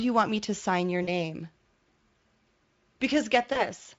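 At 1.03 to 1.09 s, right after "me to sign your", and again at 3.53 to 3.63 s, VoIP packet loss concealed by the speech codec appears. The decoder fills gaps of about 40 ms and 20 ms by extending its last pitch and filter, producing brief fading buzzy or noisy smears. The second gap leaves a short weak tail.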